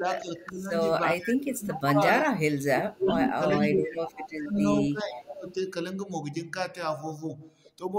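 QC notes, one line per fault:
0–0.72, 0.99–2.4, 2.65–4.6 and 4.89–5.58 s: speech suppressed in double talk. The speech dips by about 15 to 25 dB in chunks, likely the canceller ducking everything while both sides talked.
1.22–1.33, 1.68–1.8, 2.25–2.29 and 3.61–3.67 s: echo leak. Short scraps of the speech come back 399 ms late, about 10 to 20 dB down, likely echo the far-end canceller missed.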